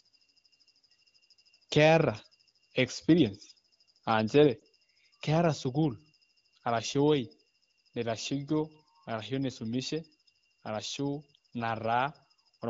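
At about 4.59 to 4.63 s, just before "keeta sukuul", there's a lost AMR speech frame: a single 20 ms chunk that didn't survive the radio link. With nothing valid to decode, the AMR-WB decoder filled the gap by repeating its last good pitch and vocal tract settings at reduced gain. You hear it as a brief dip or warble in the speech, which picks up again right after. The wideband coding around it sounds clean, which fits a rate near 15.85 kbit/s.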